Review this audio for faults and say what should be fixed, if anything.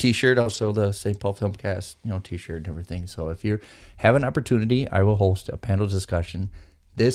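A short concealed packet loss sits at 0.41–0.48 s: about 40 ms never arrived, and the receiver extended the preceding sound to bridge it. On a spectrogram, that stretch looks smeared before blending back. Reducing jitter-buffer underruns and network loss would prevent it.

A lost packet rebuilt from error correction follows at 0.46–0.68 s, where 120 ms were rebuilt from low-bitrate copies, which fits six 20 ms packets. There is no gap in the waveform, but the spectrogram shows a noisier, coarser texture through that stretch. Improving network stability or raising the error-correction budget would prevent it.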